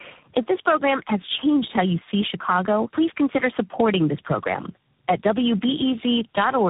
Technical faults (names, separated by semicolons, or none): tandem speech coding